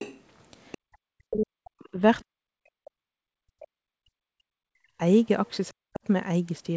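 This speech clip, whose band stops at 8 kHz as fits a G.722 call path at 64 kbps, shows the other side's voice leaking through, likely because the echo canceller left part of the loudspeaker signal in the microphone feed. Brief scraps of a second voice surface from 0.0 to 0.2 s and from 0.72 to 0.78 s, roughly 20 dB under the talker, and a fainter trace, around 35 dB down, appears at 5.46 to 5.5 s. Speech is also suppressed in double talk: with both sides talking at once, the canceller likely could not separate the near talker from the echo and attenuated everything. The talker's level collapses by as much as roughly 40 dB from 0.95 to 2.01 s, from 2.22 to 5.0 s and from 5.7 to 6.04 s. Together these dips cover over four seconds, and the speech fades or drops out in pieces.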